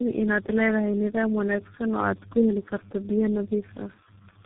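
Tandem speech coding runs the speech through four codecs in a row, ending in G.723.1; throughout, it sounds rough, warbly and muffled, empty above 3.8 kHz.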